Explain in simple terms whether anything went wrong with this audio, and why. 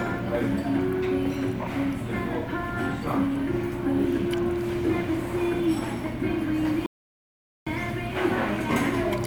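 A playback stall hits at 6.86 seconds: the sound cuts out mid-flow and stays silent for about 0.8 seconds, until 7.67 seconds. The likely cause is the player running short of data, or being briefly held up, so it had nothing to send until it recovered.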